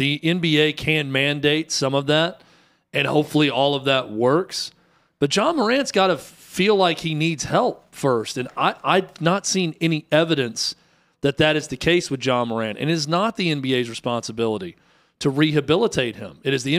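Listening through the speech recording, nothing stood out as a technical fault at any point.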